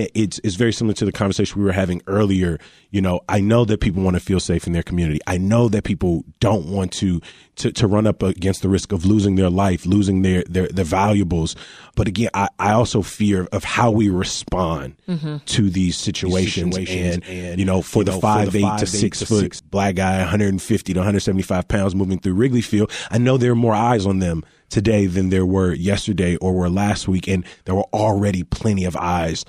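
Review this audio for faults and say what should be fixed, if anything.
From 16.25 to 19.59 s, just after "to these" and ending before "black guy", the speech has a doubled audio track: a second full-band copy trails about 400 ms behind, around 5 dB quieter. Unlike room echo or reverb, it has no decay or room colour and it begins and ends abruptly. It likely comes from the same audio being captured again through a slower path, or from an edit leaving two offset copies. To prevent it, monitor only one capture route and check edits for overlapping duplicate regions.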